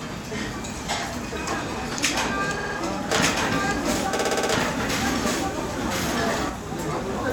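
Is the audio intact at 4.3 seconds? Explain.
No. Around 4.3 seconds there's a doubled audio track running from 3.09 to 6.49 s: a full-band copy of the sound trails about one second behind at roughly the same level, with no decay or room colour, and it starts and stops abruptly. The likely cause is a second, slower capture path or an edit holding two copies out of step.

On top of that, there are repeated frames from 4.15 to 4.51 s. The same short slice of sound plays over and over, which fits a 60 ms block being repeated about six times. You hear it as a stutter, and the clip grows by 360 ms.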